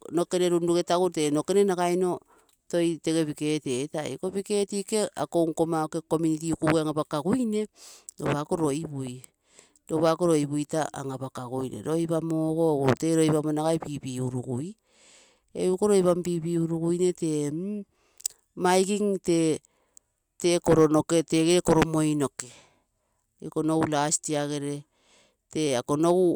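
Nothing in this speech recording stands out as a technical fault, so there's no problem here to point to.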